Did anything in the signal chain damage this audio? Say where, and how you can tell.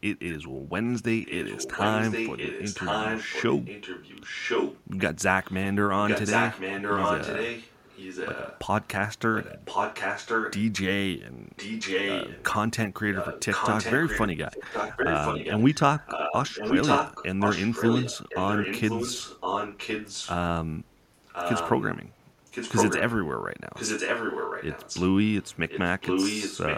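Yes, an echo leak in call processing. A copy of the speech, trailing about 1.06 s behind, sounds at 1.24–4.84, 5.43–8.59, 9.33–10.6, 11.57–12.45, 13.14–20.35, 21.27–21.82, 22.46–23.03 and 23.75 s to the end, nearly as loud as the speech itself. The far end's echo canceller likely failed to remove its loudspeaker pickup.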